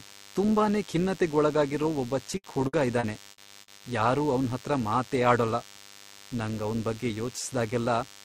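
Throughout the speech a thin, rasping DECT cordless phone buzz sits roughly 25 dB below the voice. A nearby handset or base station's radio bursts, every 10 ms, are rectified in the audio circuit into a 100 Hz tone with dense harmonics. It sounds brighter and edgier than smooth mains hum.

From 2.37 s to 3.81 s, repeated packet loss (robotic sound) makes the speech choppy, with pieces missing. Each gap, the longest about 60 ms, was patched by extending the preceding sound, concealing 320 ms in total. Unlike plain silent dropouts, the holes are filled with smeared, repeated fragments.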